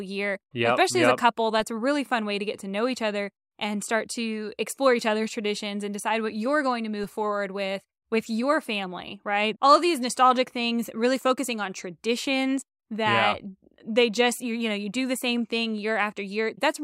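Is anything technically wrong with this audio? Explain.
Yes. At 7.04 s there is a DC step: the waveform's zero line abruptly shifts by about -34 dBFS, then drains away as a 20 Hz high-pass pulls it back. This gives a brief low thump. Unlike a dropout or glitch, the speech continues unbroken through it.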